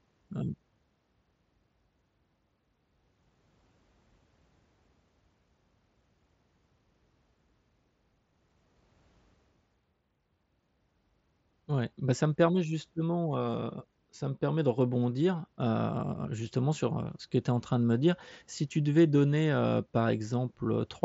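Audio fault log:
No faults found in this speech; the band stops at about 7.7 kHz, consistent with a Bluetooth mSBC headset codec link.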